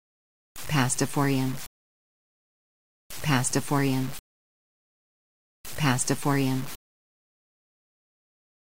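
Low bit depth without dither runs through the whole clip as a coarse, grainy distortion that changes with the sound, turning quiet passages gritty and sputtery. The likely cause is truncation to about 5 bits with no dither, leaving the error only around 15 dB below the signal.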